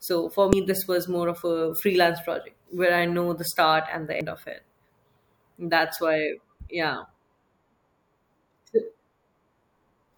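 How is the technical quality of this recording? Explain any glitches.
Two brief glitches mark the recording, both from damaged data in a compressed stream. At 0.53 s, just before "this was more of", a brief glitch cuts through the speech, and at 4.21 s, between "the start and the" and "of it", a second short glitch appears. Each time, corrupted bytes in the compressed data make the decoder misread the affected frames and lose sync until it finds the next valid frame header, leaving a split-second disruption in the sound.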